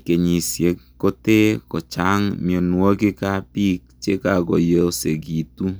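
No technical faults can be heard anywhere in the recorded speech, which keeps a steady, unbroken signal throughout.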